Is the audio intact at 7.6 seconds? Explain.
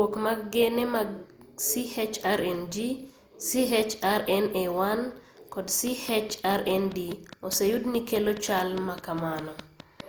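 No. At 7.6 s a train of clicks is running, from 5.87 s to 10.01 s. Evenly spaced pulses of nearly identical shape arrive at 4.84 per second, about twenty in total, peaking around 10 dB above the speech. They sound like a steady mechanical ticking laid over the speech and carrying through the pauses. The likely source is electrical interference from nearby equipment or a faulty connection or power supply.

Generation loss also affects 7.6 s and the whole clip. The speech sounds swirly, smeared and hollow, with consonant attacks blurred, more than a single lossy pass would cause. The likely cause is the audio being decoded and re-encoded with Opus at 48 kbit/s about three times. Each pass re-quantises on a shifted frame grid, so noise builds up with every generation.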